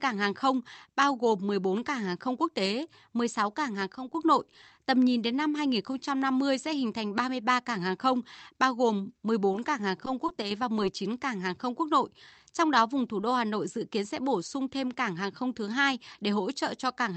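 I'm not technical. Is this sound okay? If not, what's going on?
No, there are two small problems. Around 3.95 to 4.15 s, right after "cảng hàng", and again from 10.42 to 10.51 s, the speech briefly dips in loudness. That's one channel dropping out: one side of the stereo signal was likely lost for a moment, so the combined sound suddenly gets quieter.

Just before that, at 10.26 to 10.30 s, there's a short concealed packet loss. About a fiftieth of a second of the call never arrived in time, so the receiver patched the gap by stretching the sound that came just before it. That leaves a tiny smear or wobble in the speech.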